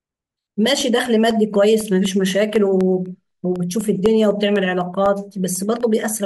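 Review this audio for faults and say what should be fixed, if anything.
Periodic USB or driver dropouts run from 0.06 s to 6.06 s, with a small tick every 0.25 s, around thirty in all, audible only where the speech carries signal. Each time, something stalls the USB bus or audio driver on a fixed schedule and roughly half a millisecond of audio is replaced with silence. On a waveform these show as tiny notches dropping to near silence at even spacing; a spectrogram shows thin, evenly spaced vertical broadband lines. To prevent this, find the background task polling on that interval, or raise the driver buffer size.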